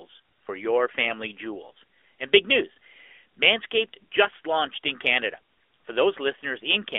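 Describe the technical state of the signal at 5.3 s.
At 5.3 s the speech sounds thin, boxed-in and audibly buzzy, with nothing below about 300 Hz or above 3.5 kHz. This is AMR narrowband mobile codec damage across the whole clip: a vocal-tract model in 20 ms frames, whose coarseness fits a 10.2 kbps mode.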